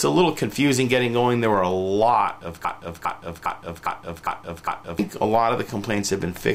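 A broken-record loop runs from 2.65 to 4.99 s: a 405 ms fragment repeats six times back to back, likely from a stalled player resending its last buffer, so the intended audio is lost.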